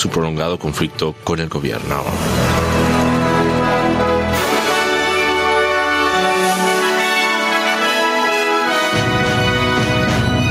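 Gain pumping runs through the whole clip. The input gain was likely set far too high, so a fast limiter keeps clamping down on each loud sound. The gain swings by around 15 dB, leaving the sound squashed and breathing.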